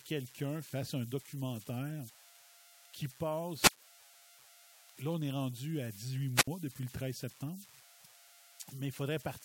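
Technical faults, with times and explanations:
Throughout: converter idle tones. An undithered delta-sigma converter settles into repeating bit patterns on low-level input, leaving a whistle around 700 Hz, about 21 dB below the speech, heard in pauses. Unlike hum, its pitch is not tied to the mains frequency.
3.57–3.82 s and 6.34–6.48 s: wireless microphone squelch dropout. The FM radio signal fades, hiss rises, then the receiver's squelch mutes for about 146 ms and 65 ms, with speech returning on "depuis le" after the second. Unlike a digital packet gap, the hiss swells before each silence.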